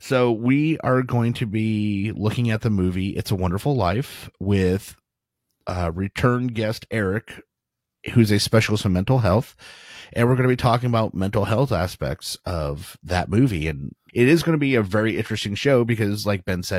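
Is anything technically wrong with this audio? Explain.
No, nothing is technically wrong with this speech recording. No faults can be heard anywhere in it.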